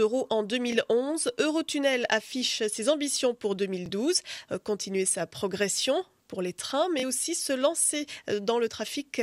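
A brief hiccup interrupts the sound three times, at 0.72 to 0.76 s, 3.86 to 3.89 s and 7.00 to 7.03 s, each time a 21.3 ms slice repeating before playback jumps ahead as though it had kept running. This is Bluetooth stutter: a packet arrived late or not at all, so the receiver replayed its last buffer to fill the gap. The length of each repeat fits a single lost frame.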